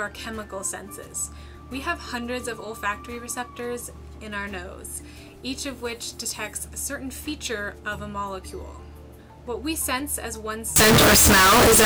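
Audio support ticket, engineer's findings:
Float read as integer, 10.76 s to 11.85 s. The sound jumps to a harsh, very loud, near-square waveform at an almost fixed, high level. Background noise is as loud as the main signal. Pitch stays traceable. The likely cause is 32-bit float samples decoded as 32-bit integers in the reading stage. Sign and exponent bits then dominate each sample value, regardless of the original level.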